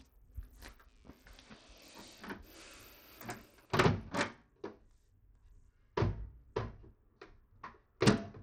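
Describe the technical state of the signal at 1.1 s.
At 1.1 s the everyday sounds carry two problems at once. Computer activity noise runs from 0.88 s to 2.88 s: a buzzy, chirping pulse train at around 100 pulses per second, sitting roughly 40 dB below the sound. Changing processor or graphics load pulls on a ground shared with the audio circuit, so the interference follows what the machine is doing rather than the sound itself. That is what separates it from steady mains hum, which holds a fixed pitch and level for the whole recording and stops at no particular moment. Here the buzz appears and vanishes as a block about two seconds long.

Beneath it, and through the whole clip, the sound has the grainy, treble-starved quality of Bluetooth SBC compression, likely at a low bit rate in the region of 80 kbps. SBC divides the spectrum into a few wide bands and shares out bits by a simple rule with no model of hearing. 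The weak upper bands are starved, so the highs flicker or drop out, and coarse quantisation leaves audible grit and aliasing. Perceptual codecs such as AAC tend instead to produce swirly, watery artefacts. SBC's damage is rougher and broadband, and clearly audible here.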